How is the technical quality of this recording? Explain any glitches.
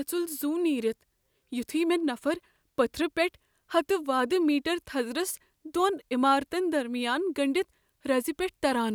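Listening closely to the recording, nothing stood out as a technical glitch or defect.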